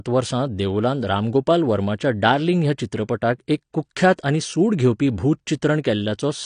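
Throughout, the speech sounds dull and smeared, with nothing above 9.7 kHz. Sibilants fizz and sustained sounds warble. The likely cause is AAC compression at a low bitrate, around 32 kbps, where AAC-LC discards the top band and starves the rest of bits.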